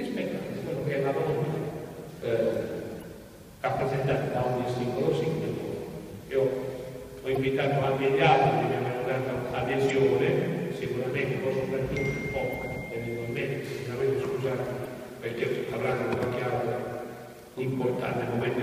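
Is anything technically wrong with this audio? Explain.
Yes. The audio has damaged data in a compressed stream, at 2.99 to 3.04 s, 7.33 to 7.37 s, 9.86 to 9.91 s, 12.50 to 12.55 s and 14.83 to 14.87 s. At each point, corrupted bytes leave the decoder unable to read the frames. It loses sync and hunts for the next valid frame header. Each glitch comes through as a brief chirp or squawk of roughly 40 ms, cutting abruptly into the sound.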